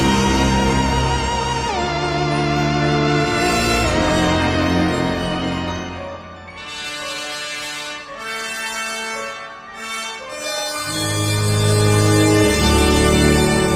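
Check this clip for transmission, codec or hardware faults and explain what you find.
Nothing stood out on listening to this clip.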